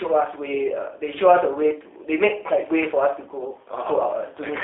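Speech throughout, coded with the G.729 codec for its whole length. The band is confined to roughly 300 Hz to 3.6 kHz, so there's no low body and nothing in the upper range. The codec rebuilds each 10 ms frame from a vocal tract filter, a pitch predictor and a few excitation pulses. That gives plainly audible roughness and a synthetic edge, consistent with an 8 kbit/s telephony link.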